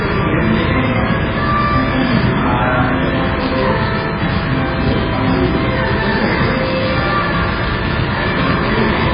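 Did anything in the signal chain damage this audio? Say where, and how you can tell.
Yes. MP3 compression has affected the whole clip, in the codec stage. Nothing is present above 5 kHz. The top end is sheared off at a fixed cut-off, and what remains has a heavy watery, swirling quality. Weak spectral components flicker on and off from frame to frame, and transients are smeared. That degree of damage points to a very low bitrate, around 16 kbps. With that few bits, the encoder likely discarded the treble and thinned out the quieter frequency lines.

Buffer tearing starts at 3.40 s and continues to the end of the clip, in the driver or buffer stage. A rough, robotic buzz at 188 Hz rides on the audio wherever there is signal, which fits a 256-sample buffer. The writer and the hardware reader of the ring buffer have drifted, so they cross inside every period. A small slice of each buffer therefore plays stale audio from roughly 10 ms earlier, with a hard splice on both sides of it.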